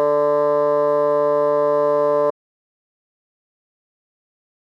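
An audio dropout to silence hits this music clip at 2.31 s and lasts to the end, about 2.3 s of silence with no room tone. The music cuts off mid-flow, which likely means the input was lost while the recorder kept writing silence.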